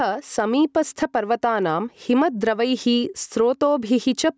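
Speech heard through a call's microphone processing, with nothing above 8 kHz, shows gain pumping throughout: the gain ducks by around 10 dB under each loud syllable, likely from excessive input gain driving a fast limiter, unlike a noise gate's hard cut-off.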